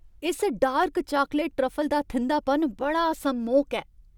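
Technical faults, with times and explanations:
0.84 s and 2.71 s, dropped samples: each moment carries a single sharp click, a thin vertical line across the spectrum. The likely cause is a handful of samples, well under a millisecond, missing from the stream, so the waveform jumps abruptly to a later value without losing audible speech.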